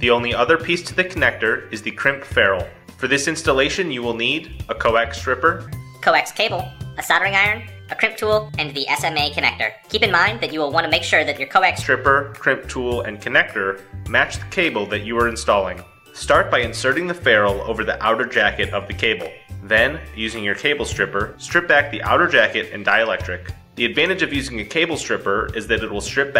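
A section at the wrong speed runs from 5.67 to 11.82 s, where the audio plays 1.32 times faster than it should, so pitch rises by about five semitones and everything sounds hurried. The likely cause is a playback or edit clocked at the wrong rate.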